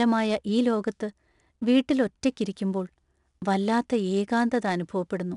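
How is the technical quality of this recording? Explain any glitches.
The recording has one clear technical fault: 4-bit ADPCM compression, present for the whole clip. The encoder stores each sample as a coarse 4-bit step from a running prediction and adapts that step size. Its error becomes a gritty hiss riding on the speech, loudest where the voice is loudest, with roughness on sharp onsets where the step lags behind. Nothing remains above 10.6 kHz, which dulls the top end and fits a rate near 89 kbps.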